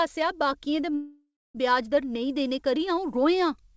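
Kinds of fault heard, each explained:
Long network dropout, 0.95 to 1.57 s: the speech breaks off and the last sound is drawn out into a fading buzz, then 270 ms of silence follows before speech returns with 600 ms lost, likely because packets stopped arriving and the receiver concealed the gap.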